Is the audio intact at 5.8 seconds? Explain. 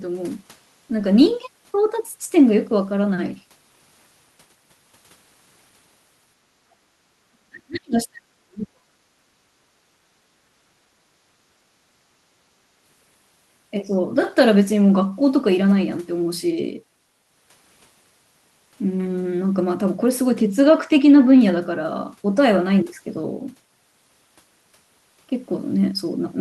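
Yes, at 5.8 seconds the speech carries on cleanly, with no dropout, click, distortion or other fault to be heard at that moment.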